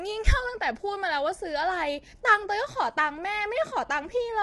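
Low-delay AAC compression runs from start to finish of this speech. The roughness and graininess point to AAC-ELD, the low-delay codec used in video calls, likely working at a bitrate around 32 kbps. At this low bitrate, noise fills the gaps between the pitch harmonics, making the damage plainly audible. Nothing sounds above 11.6 kHz, so the top band is missing.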